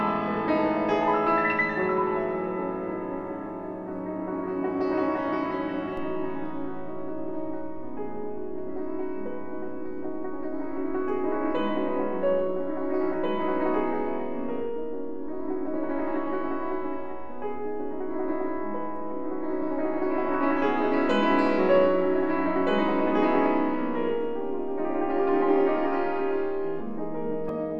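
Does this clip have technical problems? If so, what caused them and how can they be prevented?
Yes. At 5.97 s there is a low thump as the waveform's zero line suddenly shifts, and a second thump or click at 27.49 s when it steps back, while the sound itself carries on unchanged. This is a DC step: an offset of about -32 dBFS appears abruptly, as when a converter recalibrates or an offset input is switched in, and then holds for roughly 21.5 s. Preventing it means using AC-coupled or high-pass-filtered inputs and avoiding recalibration or switching during recording.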